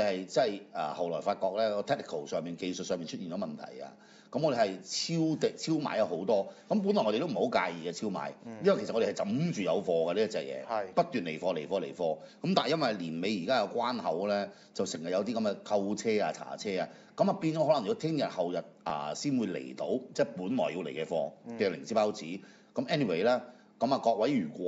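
No technical faults can be heard anywhere in the recording. Nothing in it calls for comment on that score.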